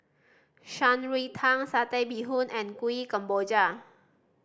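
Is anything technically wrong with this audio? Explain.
No, no technical faults heard.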